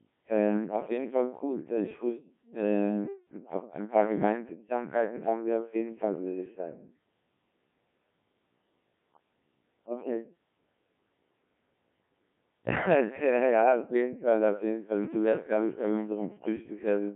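Throughout, the speech passes through a Codec 2 vocoder at 1.3 kbit/s, resynthesised from pitch and envelope, so it sounds heavily robotic and buzzy, band-limited to about 150 Hz–3.4 kHz, nothing above 3.5 kHz.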